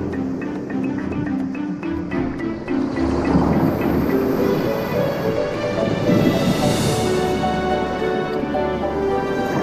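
Sudden jumps in the sound at 5.54, 6.88 and 8.4 s are likely dropped buffers (overruns), unread samples overwritten, each skipping a few tens of milliseconds.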